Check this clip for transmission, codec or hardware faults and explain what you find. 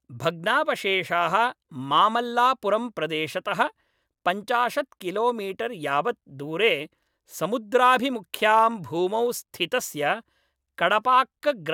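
No transmission, codec or hardware faults are audible anywhere in the speech, which stays continuous throughout.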